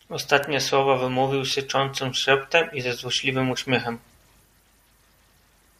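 Speech recording carrying two bit error spikes, at 0.44 s and 1.51 s. Each is a single sharp, broadband tick with no relation to the surrounding signal, peaking at about -8 dBFS and about -14 dBFS respectively. The first sounds like one corrupted sample, the second like two adjacent ones. The mechanism is a flipped bit in memory or on a digital link, which throws the sample value by a power of two before it immediately returns.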